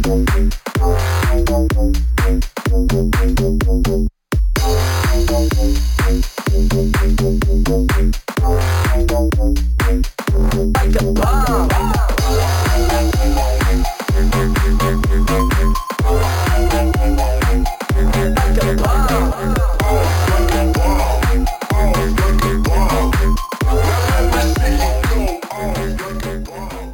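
Imaging from sample-and-hold upsampling runs through the whole clip. A bright, metallic fizz rides on top of the audio and rises and falls with its level. The lowest mirror band sits between about 5.5 kHz and 11 kHz, and it moves opposite to the pitch of the source. This points to a low-rate source, near 11 kHz, brought up to 44.1 kHz by repeating each sample without any smoothing filter. The images sit about 22 dB below the wanted signal.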